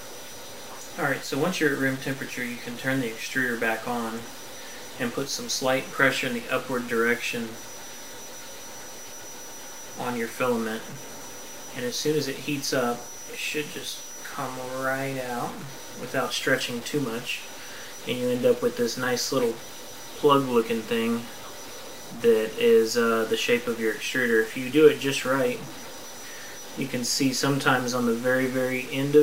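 A stuck bit runs through the whole audio, likely one data line or converter bit held at a fixed value. About half the samples land off by a step of roughly -35 dBFS, tracking the waveform, which adds a constant distortion noise that persists even where the signal falls quiet.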